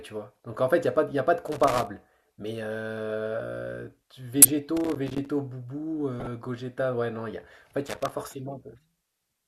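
From 1.48 to 1.87 s, loose connector crackle: a worn contact intermittently breaking the line gives irregular scratchy bursts, recurring at 4.77 to 5.28 s and 7.86 to 8.12 s. At 4.40 to 4.49 s, a corrupt frame decoded: damaged compressed data spread energy across wrong frequencies, producing a loud burst peaking around -5 dBFS over a handful of frames, with a quieter one near -20 dBFS at 6.19 to 6.27 s.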